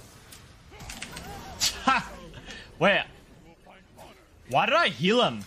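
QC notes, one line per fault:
Throughout, MP3 compression: the audio has a plainly audible watery, swirling texture, with faint detail flickering in and out from one moment to the next. Transients sound smeared and the brightest content turns metallic. The likely cause is a low-bitrate MP3 encode, consistent with around 64 kbps, where the encoder runs short of bits and zeroes quiet frequency lines frame by frame.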